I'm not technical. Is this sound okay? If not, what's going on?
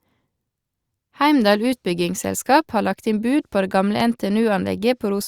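No. There is a loud pop at about 4.00 to 4.02 seconds in this speech. It is a single sharp click, a bit louder than the speech itself. The speech carries on underneath it without a break. A pop like this happens when a sudden jolt of electricity gets into the signal. That is likely from a cable being plugged in, a switch being flicked, static, or a brief hiccup in the audio equipment.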